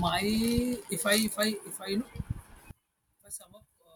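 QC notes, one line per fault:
2.71–3.95 s, one channel inverted: in mono the speech drops by about 19 dB to a faint residue, likely one channel's polarity reversed, cancelling the shared centre content.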